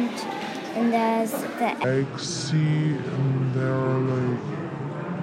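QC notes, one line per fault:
1.84 s to end: section at the wrong speed. From here the sound drops abruptly deep and sluggish, about ten semitones lower, playing at 0.611 times its proper speed so pitch and tempo fall together. This likely comes from the section being played back against the wrong clock.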